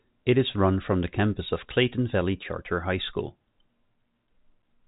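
A speech recording with nothing technically wrong with it, carried over ordinary telephone coding that passes nothing above 3.8 kHz.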